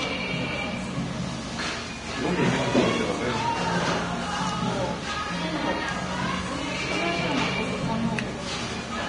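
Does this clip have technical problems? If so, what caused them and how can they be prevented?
Yes. The audio was likely squeezed through Vorbis compression at a very low setting, something in the region of 31 kbps, so the codec dropped everything above about 10.6 kHz and quantised the remaining treble so coarsely that its fine detail was replaced by noise of similar energy. Throughout the clip this leaves a dull top end laced with hiss and grain, roughened tones and smeared attacks. Encoding at a higher Vorbis quality setting, or keeping a lossless copy, would prevent it.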